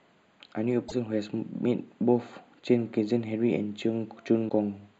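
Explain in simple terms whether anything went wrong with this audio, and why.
Two things went wrong. Throughout the speech there is channel delay (comb filtering): one channel runs a fraction of a millisecond late, so mixing them cancels evenly spaced frequencies, the first around 5 kHz, leaving a steady hollow colouring rather than anything that comes and goes. There is also damaged data in a compressed stream at 0.85 to 0.92 s and 4.46 to 4.51 s. The player misreads the broken section, giving a brief glitch. These are sudden blips, not a constant colouring of the sound.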